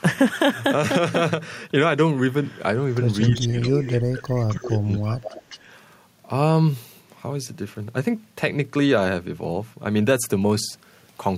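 From 3.22 to 3.92 s an echo leak sends a delayed copy of the speech back about 266 ms late, roughly 10 dB below the talker. A loudspeaker echo canceller likely let it through. The single distinct lag sets it apart from room reverberation, which smears into a tail.

Speech suppressed in double talk overlaps this at 3.38 to 3.65 s and again at 3.93 to 4.27 s. There the talker drops by around 20 to 25 dB, likely the canceller turning down everything it could not separate. Unlike packet loss, these dips fit moments when the far side was playing on the loudspeaker while this side talked.

The echo returns at 4.25 to 4.79 s, about 15 dB down. Suppression then runs from 4.49 to 5.43 s. Short echo scraps at 5.25 to 5.29 s and 5.49 to 5.59 s arrive about 209 ms late, the second near 20 dB down.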